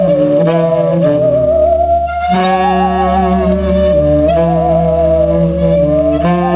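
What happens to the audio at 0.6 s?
At 0.6 s the audio shows gain pumping, which runs through the whole clip. The gain swings by around 10 dB under each loud sound, leaving the level squashed. The likely cause is gain set far too high, with a fast limiter pulling it down on every peak. The narrowband call path, with nothing above 4 kHz, carries this pumping through.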